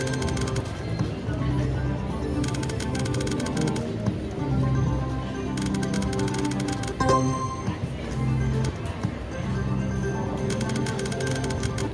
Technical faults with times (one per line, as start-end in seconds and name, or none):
none